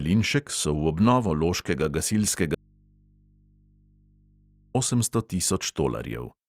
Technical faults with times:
2.55-4.75 audio dropout to a faint residue

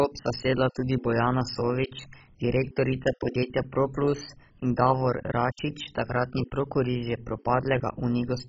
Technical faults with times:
0.00-8.48 MP2 compression

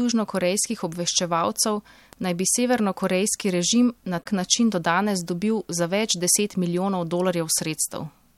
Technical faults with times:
4.19-4.26 damaged data in a compressed stream

